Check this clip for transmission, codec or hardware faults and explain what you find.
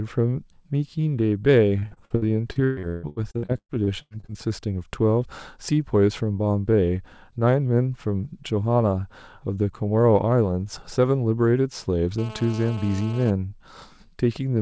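Two faults stand out, one early and one near the end.

From 1.79 to 4.37 s there's repeated packet loss, giving that robotic sound. Around twenty short dropouts hit the speech, the longest about 145 ms. Each hole gets patched by stretching the last bit of sound, so roughly 38% of that stretch is filler. It comes out choppy, with pieces of speech missing.

Then from 12.18 to 13.31 s there's GSM phone buzz. A nearby 2G phone sits in an active call, pulsing its transmitter at 217 Hz, and the audio circuitry rectifies those bursts. You get a hard, raspy, harmonic-rich buzz, steady throughout, about 17 dB under the speech. It has nothing to do with the signal itself.

The G.722 call path works normally, with its usual coding noise and band limit, nothing above 8 kHz.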